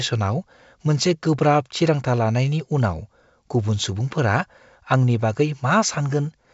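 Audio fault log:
No faults turn up here, just speech carried over G.722 wideband telephone coding with the top end stopping at about 7.7 kHz and only faint coding hiss, which fits the full 64 kbit/s mode.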